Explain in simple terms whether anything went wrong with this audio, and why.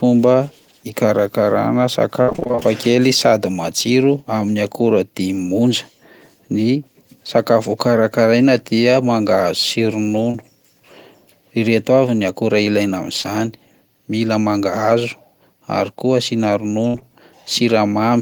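Several moments of this speech recording were damaged by lost pieces of the transmission. Each time, the receiver had to fill the gap by guessing.

From 2.21 to 2.63 s there is repeated packet loss, which gives a robotic sound. Ten separate gaps hit this short stretch, and about half of it had to be patched by stretching out the previous sound. The longest hole was about 62 ms. Because the holes come one after another, the speech turns choppy and machine-like for almost half a second. That sets it apart from the isolated glitches later on.

There is short concealed packet loss at 10.31 to 10.36 s, and again at 13.22 s, just after "ny akora ilaina". Each time, only about 20 ms went missing and was smoothly covered over. You hear a brief smear or wobble, and possibly a clipped consonant. These are isolated, unlike the robotic stretch.

At 16.88 to 16.96 s, right after "ary koa asiana", there is a burst of packet loss. 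About 60 ms vanished in one go. The last sound was held and faded out, so you hear a brief buzz or hiss in place of the real speech before it picks up further along. Two more short concealed losses follow straight after it, at 16.96 s and 16.99 s. This piles a few more small glitches onto the same spot, ending at 17.03 s. The single longer, fading gap is what separates this from the brief smears.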